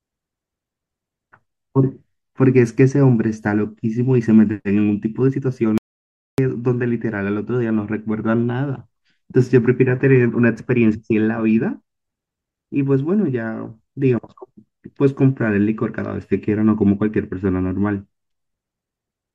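Speech clip with an audio dropout to silence from 5.78 to 6.38 s: about 0.6 s of silence with no room tone, likely a briefly lost input.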